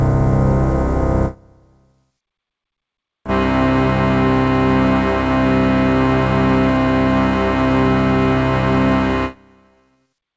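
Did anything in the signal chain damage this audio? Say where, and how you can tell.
No, nothing in the signal chain damaged this sound. It went through a call path, and the absence of content above about 8 kHz fits a wideband codec such as G.722.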